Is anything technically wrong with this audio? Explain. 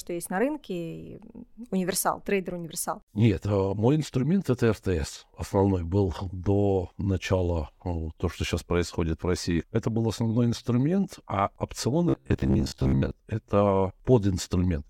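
Yes. From 12.09 to 13.11 s, just after "был основной инструмент а", the speech becomes robotic sound from repeated short buffers. Most of that stretch is likely the same 15 ms chunk looping while fresh audio is skipped, which stamps a fixed 66.7 Hz metallic buzz over the voice. Unlike a plain dropout or stutter, the rigid buzz follows the original speech only roughly.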